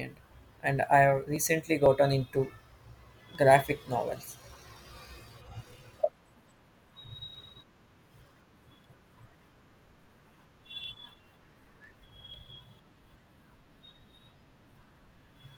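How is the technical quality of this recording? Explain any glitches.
The recording is marred by one recurring glitch. From 0.36 to 15.33 s, regular ticks sound every 0.50 s during speech. These are periodic USB or driver dropouts: a background task stalls the audio path, skipping about a millisecond of signal each time, roughly thirty times.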